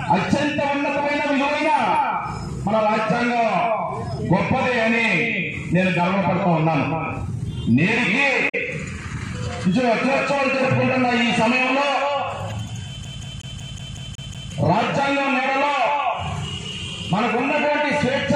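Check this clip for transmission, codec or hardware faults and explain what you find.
Two kinds of fault can be heard: damaged data in a compressed stream, twice, and a CD stuck on one turn.

Damaged data in a compressed stream occurs at 8.45 to 8.55 s and at 12.50 to 12.52 s. Corrupted bytes make the decoder misread frames, lose sync and hunt for the next header, producing brief chirps or blips.

A CD stuck on one turn runs from 13.05 to 14.52 s. A scratch sends the laser back one track each rotation, so a 184 ms slice of audio repeats eight times, with a short mute at every jump, giving a fast, even stutter.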